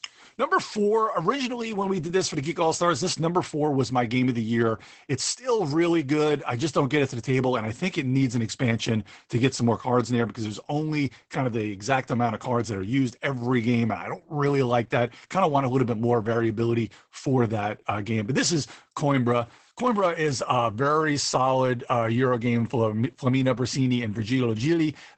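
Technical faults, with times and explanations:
Throughout: Opus voice compression. The speech stops near 8 kHz and sounds muffled and hoarse. Coarse SILK-style coding suggests about 12 kbps.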